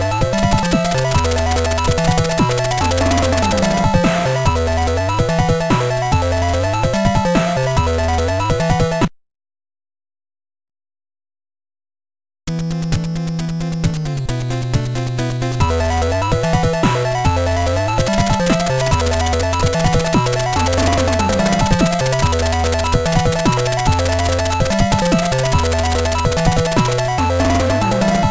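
Aliasing runs through the whole clip. The sample rate was reduced without an anti-aliasing filter, and the spectrum stops abruptly at 8 kHz, which fits a conversion from 48 kHz down to 16 kHz. Content that sat above 8 kHz has folded back below it as inharmonic tones at roughly 20 dB under the signal. Sibilant and high-frequency material therefore sounds gritty and metallic, with energy packed hard against the 8 kHz band edge.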